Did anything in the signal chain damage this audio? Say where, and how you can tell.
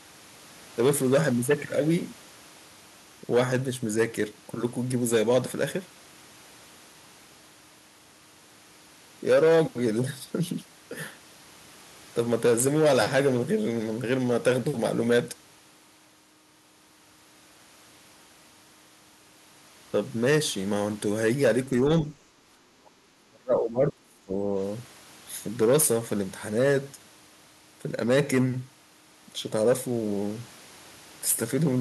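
Yes. The damage sits in the call processing stage. From 22.71 to 24.56 s the speech drops sharply, by around 30 dB at its deepest, for about two seconds in total. This is speech suppressed in double talk. The likely cause is both ends talking at once. The echo canceller could not tell the near talker from loudspeaker echo, so it attenuated everything. The level then returns once the overlap ends.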